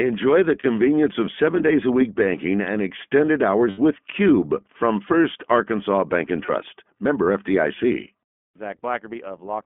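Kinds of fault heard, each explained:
iLBC codec: the whole speech clip has been squeezed through this narrowband VoIP codec, which fits a rate of about 15 kbps in 20 ms frames. Everything sits in the phone band, roughly 200 Hz to 3.4 kHz, so it sounds thin, and the coding leaves a plainly audible rough, slightly synthetic edge.
Lost iLBC frames: there are three short dropouts where the decoder fills the gap by repeating the last pitch cycle with some noise mixed in, so you hear a brief held, buzzy vowel. They fall at 0.60 s, just before "of seven days a", at 3.70 s, right after "week banking and extended", and at 6.46 s. They last about 40, 80 and 20 ms. Because iLBC frames are coded independently, the speech recovers almost immediately after each one.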